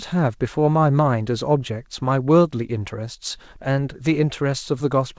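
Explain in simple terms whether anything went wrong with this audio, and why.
Nothing stood out as wrong when listening to this speech recording; it sounds the way an ordinary internet call normally does.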